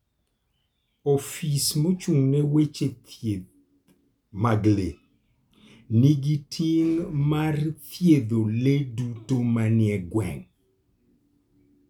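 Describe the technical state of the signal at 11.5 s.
At 11.5 s the signal is intact, with no audible fault at that point.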